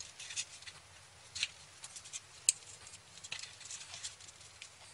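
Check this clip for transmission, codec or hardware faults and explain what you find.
Nothing audible here points to a transmission, codec or hardware problem.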